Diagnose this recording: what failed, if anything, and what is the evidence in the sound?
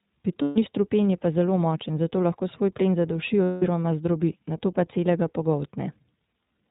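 The codec stage shows iLBC coding: band-limited below 4 kHz with plainly audible roughness and a synthetic edge, consistent with roughly 15.2 kbps in 20 ms frames.

Network loss produced lost iLBC frames at 0.42–0.58 s, before "ni strupen je pa", and 3.44–3.64 s, between "lahko svoj plen zaduši" and "zdrobi nato pa celega"; concealment holds a buzzy repeated pitch cycle, recovering immediately.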